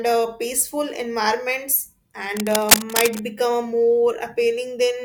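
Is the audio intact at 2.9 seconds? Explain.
No. From about 2.37 to 3.22 s, cable scratch noise sits over the speech at roughly the same level as the speech itself. It sounds like dense, ragged scratching and rustling. The likely cause is a worn cable or connector being moved, so that its contact resistance jumps around quickly. Vinyl crackle would be sparse, separate clicks. Here the bursts are packed together, uneven, and confined to this one stretch.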